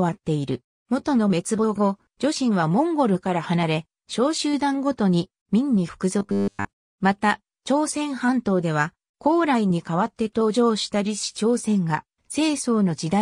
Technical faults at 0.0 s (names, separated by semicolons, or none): none